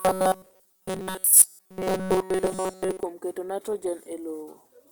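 From 0.01 to 3.03 s the speech becomes a rigid, metallic 188 Hz buzz: robotic sound, likely from repeated short buffers of about 5 ms.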